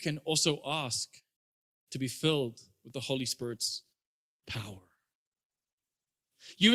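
Adaptive stream at a lower bitrate from 3.39 s to the end: the speech abruptly takes on stronger codec artefacts, with no gap at the switch. This points to the stream dropping from roughly 64 kbit/s Opus to 16 kbit/s.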